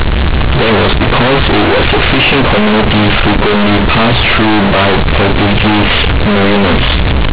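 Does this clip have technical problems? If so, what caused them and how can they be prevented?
Yes. The speech is harsh, buzzy and far too loud throughout, with heavy noise filling the pauses. This is companded audio read as linear: A-law bytes were played as plain 8-bit samples without expansion, so every sign change swings across half the range. The telephone band limit below 4 kHz from the G.711 coding itself is expected. Prevent it by decoding A-law to linear PCM before playback.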